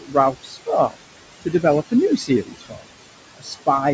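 Noise suppressor artifacts run through the whole clip. The suppressor treats the room noise, which sits about 11 dB below the speech, as steady noise and cuts it by about 21 dB. The background sinks in the gaps and rises under the speech.

Speech cut by the noise suppressor occurs at 0.00 to 0.16 s, 0.32 to 0.69 s, 1.41 to 1.64 s, 2.17 to 2.87 s and 3.37 to 3.67 s. In these stretches the suppressor mistakes quieter speech for noise and pulls it down by about 17 to 19 dB, so those parts sound swallowed and faint. The longest loss is around half a second within the 2.17 to 2.87 s stretch.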